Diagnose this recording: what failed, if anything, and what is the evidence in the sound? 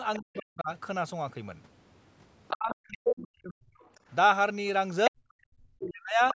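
Call processing stage, echo path: the other side's voice leaking through is audible at 0.15–0.37 s, 2.48–2.98 s and 3.79–4.15 s, about 20 dB below the speech (the last about 35 dB). On a spectrogram, a faint second harmonic pattern sits beneath the main trace. This is likely loudspeaker pickup the echo canceller left behind.

Call processing stage, double talk: speech suppressed in double talk occurs at 0.19–0.7 s, 2.52–3.74 s and 5.09–6.35 s, where the level falls by as much as about 40 dB. The waveform envelope dips, and the spectrogram shows the band stopping at 8 kHz as normal call microphone processing does. The canceller likely ducked the near talker along with the loudspeaker echo while the two overlapped.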